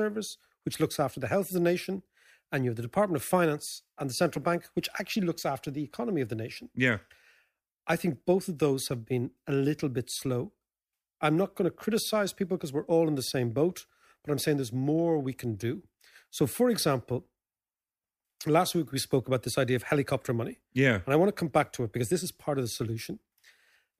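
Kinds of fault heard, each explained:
No technical faults can be heard anywhere in the audio; the signal stays continuous and stable throughout.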